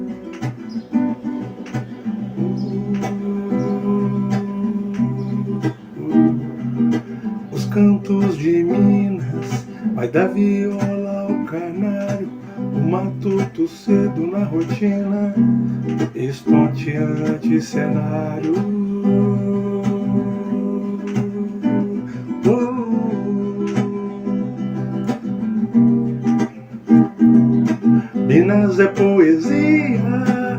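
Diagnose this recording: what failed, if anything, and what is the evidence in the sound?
The network stage failed: the connection slowed, so the adaptive stream switched to a lower bitrate from 22.68 to 24.68 s. Without any gap, the sound abruptly loses everything above 13.9 kHz and codec artefacts rise, which fits a drop from roughly 96 kbit/s AAC to 16 kbit/s HE-AAC.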